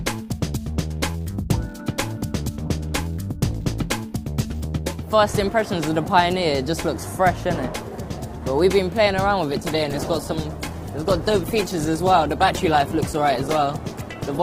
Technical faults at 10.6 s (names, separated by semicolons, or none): call bitrate drop